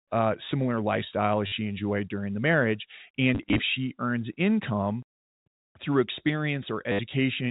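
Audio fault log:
1.47–1.52 s, packet loss with last packet repeated: 50 ms of audio went missing after "uh similar lifestyle as" and the receiver replayed the last packet to fill it, giving a short robotic stutter.
3.35–3.59 s, packet loss with last packet repeated: gaps of up to 20 ms, 120 ms in all, were patched by repetition after "enjoyed during the marriage", giving a broken, buzzy flutter at about 100 Hz, which fits 10 ms packets.
6.92 s, packet loss with last packet repeated: 70 ms were filled with repeats, producing a brief stutter.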